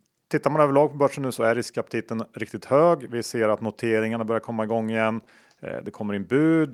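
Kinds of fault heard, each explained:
Short stall from a late packet: just after "börjar komma igång igen", at about 5.23 to 5.27 s, one packet of this speech arrived late and the jitter buffer emptied. The receiver held the last sound for roughly 20 ms, then resumed from the same point once the packet came in. Nothing is lost; instead a brief sustained sound with a faint buzz or dip is heard, and the playback timing shifts later by 20 ms from there on.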